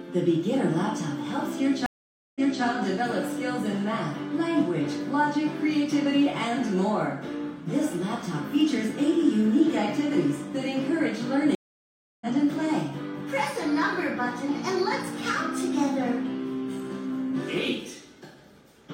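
At 1.86 s the sound drops out for about half a second (0.49 s) and comes back at 2.63 s slightly behind where it stopped, repeating roughly 0.28 s of material. At 11.55 s a longer gap of 0.66 s follows, and when sound resumes at 12.27 s it has jumped ahead by about 0.7 s. Both are stream reconnects: the connection broke, the player fell silent, then rejoined mid-stream with a fresh decoder, whose first frame fades in.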